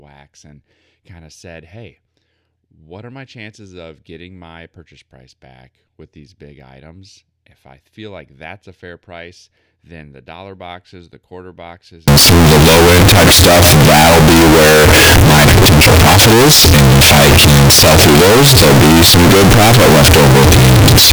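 From about 12.08 s, right after "boxes the quarter boxes", through to the end at 21.12 s, the speech turns into loud, harsh distortion, with quiet stretches blasting as hard as the rest. That's likely signed and unsigned mixed up on 16-bit samples, flipping the top bit so every zero crossing leaps full-scale.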